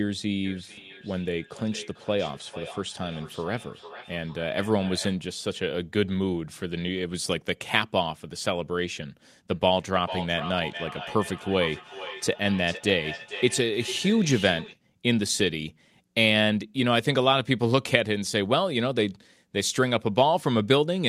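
A second device in the same room is replaying the call into a microphone, and no echo canceller can remove sound it did not play itself, so a feedback echo between two devices runs from 0.45 to 5.19 s and again from 9.5 to 14.81 s. The speech returns as a delayed copy roughly every 400 ms, peaking at about 18 dB below the speech in the first stretch and a louder, about 12 dB below, in the second.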